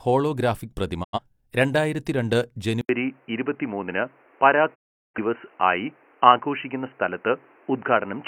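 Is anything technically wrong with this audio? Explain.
Yes, there are two kinds of fault.

A digital broadcast dropout occurs twice: 1.03 to 1.19 s, right after "ഹോളോഗ്രാഫിക് പ്രതിമ", and 4.74 to 5.19 s. The receiver stopped getting usable frames and muted, fading out over 20 ms. About 85 ms and 384 ms are lost, which fits roughly two and nine frames. The sound returns unchanged in tone, so these are gaps, not a device change.

At 2.81 s, after "ഹോളോഗ്രാഫിക് പ്രതിമ രണ്ടായിരത്തിരണ്ട്", an 80 ms silence is followed by duller audio with nothing above 3 kHz and a new noise floor about 35 dB down, at roughly the same level. This is likely an input switched to a poorer device. Unlike the dropouts, the narrower band lasts to the end.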